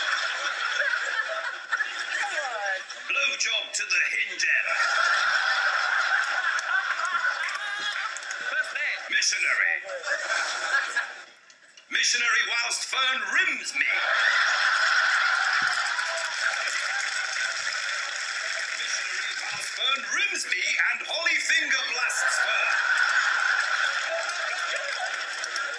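No technical faults are audible.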